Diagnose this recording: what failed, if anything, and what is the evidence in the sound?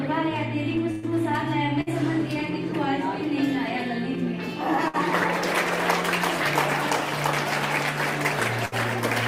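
Network failure: a burst of packet loss at 0.91, 1.81, 4.88 and 8.65 s. Each drops about 60 ms. Concealment stretches the last sound, which fades before the audio resumes further on.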